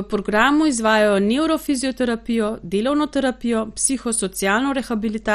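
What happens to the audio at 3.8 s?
At 3.8 s the speech carries heavy MP2 compression damage, present from start to end of the clip. Nothing is heard above 14.5 kHz. The sound is dull, with a gurgling, granular grit. The likely cause is MPEG Layer II coding with too few bits, which fits a rate near 56 kbps. The encoder shuts off upper sub-bands and quantises the rest coarsely. Bands drop in and out, so the texture churns.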